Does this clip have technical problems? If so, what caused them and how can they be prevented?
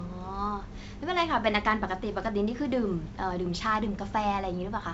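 No, no technical problems can be heard in this speech clip. It has come through G.722 wideband telephone coding at 64 kbit/s, which keeps the speech clear up to about 7 kHz, and any trace of the coding is faint at most.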